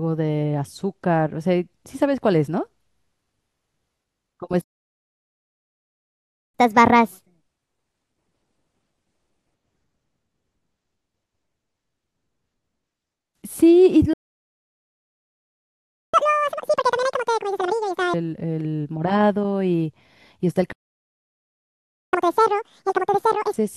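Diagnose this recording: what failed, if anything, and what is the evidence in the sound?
Playback stalls in the playback stage: the speech goes silent at 4.62–6.54, 14.13–16.14 and 20.72–22.13 s, likely from the player starving or its thread blocking.

After each gap, the player resamples its backlog in a catch-up at higher speed: 1.25x, about four semitones up, at 6.54–9.54 s; then 2x, roughly ten semitones, at 16.14–18.14 and 22.13–23.54 s.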